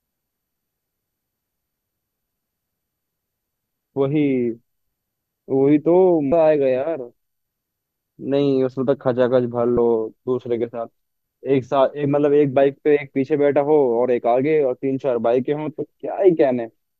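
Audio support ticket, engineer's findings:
Damaged data in compressed stream, speech, 6.29–6.32 s and 9.75–9.78 s: brief glitch, about 30 ms each. Component: decoder input. Corrupted bytes misparsed, sync lost until next frame header found.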